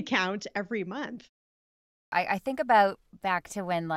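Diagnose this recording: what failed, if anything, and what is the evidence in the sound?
After "every month" there is a short gap of about 0.35 s, and then the next stretch of speech bursts in mid-sound. From 1.56 s to 2.12 s roughly 0.56 s of audio is missing, and the sound resumes abruptly at "I I think about" with no natural onset. This is a clipped start after a pause at the playback stage: the output device idles during the brief silence and needs over half a second to wake and lock again, swallowing the opening of the next phrase.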